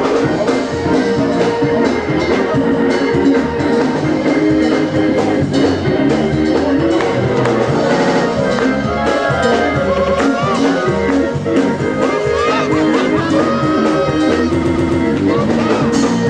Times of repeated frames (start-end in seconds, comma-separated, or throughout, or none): 2.71-2.84, 7.98-8.22, 9.97-10.18, 14.62-15.01